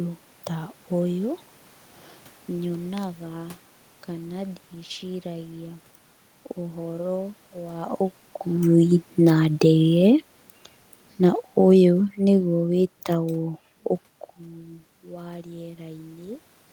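Automatic gain falling, from 11.16 to 13.51 s: the gain control judged the input too loud or its background noise too strong and eased its gain down by about 4 dB over roughly two seconds, so the speech and the room noise behind it sink together rather than the voice alone fading.

Automatic gain rising, from 14.42 to 16.47 s: after the talker moves away from the microphone around 14 s, the input drops by about 18 dB. The gain control then lifts its gain by about 4 dB over two seconds, and voice and background swell up together.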